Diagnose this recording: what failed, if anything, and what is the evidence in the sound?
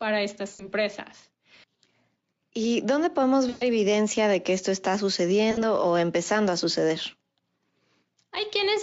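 Network stage: VoIP packet loss concealed by the speech codec at 0.49–0.71 s, 3.49–3.70 s (after "dónde podemos") and 5.51–5.64 s (before "o empezando a"). The decoder extrapolates its last pitch and filter into a buzzy tone or coloured noise that fades out.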